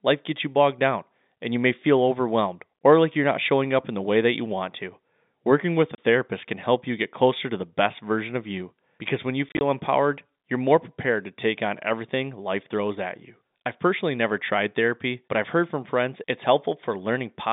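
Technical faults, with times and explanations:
5.95 s, packet loss filled with silence: a 30 ms hard-edged hole right after "with a", which fits three lost 10 ms packets swapped for silence.
9.49 to 9.61 s, packet loss filled with silence: after "you because when you", about 70 ms of silent gaps are scattered over 120 ms, the longest 30 ms, leaving choppy fragments before "empowered you're more prepared".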